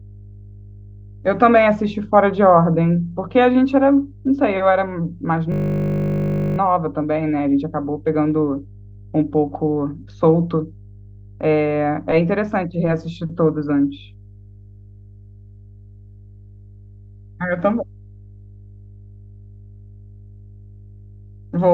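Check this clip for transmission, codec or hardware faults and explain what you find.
Two faults are present in this speech clip.

Mains hum runs through the whole clip. It is a steady 50 Hz tone, about 25 dB below the speech. A ground loop or nearby transformer is leaking the power line into the signal path. It sits underneath everything as a constant low drone.

A system hang loop occurs from 5.52 to 6.58 s. The machine stalled while the audio hardware kept replaying one 20 ms stretch of its buffer, about fifty times. That rapid repetition becomes a flat 50 Hz buzz, pitched like the hum, replacing the speech.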